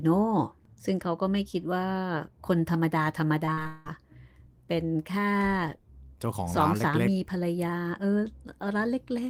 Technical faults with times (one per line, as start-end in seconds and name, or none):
3.45-3.87 repeated packet loss (robotic sound)